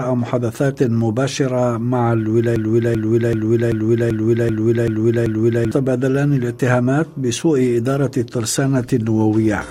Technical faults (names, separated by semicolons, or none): broken-record loop